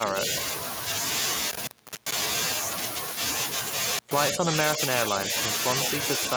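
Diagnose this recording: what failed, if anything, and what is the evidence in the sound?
Call processing first: the speech dips at 0.0–0.25 s, by roughly 10 dB, then more gently, about 5 dB, at 4.32–4.53, 4.76–4.81 and 5.09–5.28 s. That pattern is likely speech suppressed in double talk, the echo canceller ducking the near talker while the far end speaks.

Analogue wiring next: an intermittent contact opens the line twice, with crackle at the edges. Between 1.51 and 2.23 s it drops out for about 0.39 s, and between 3.95 and 4.12 s for about 0.12 s, like a loose plug or cable briefly losing connection.

Back in call processing, a faint delayed copy of the speech surfaces at 5.84–5.88 s, about 10 dB under the speech and trailing it by 150 ms. That's likely echo leak: a far-end loudspeaker getting into the microphone, with the canceller letting a scrap through.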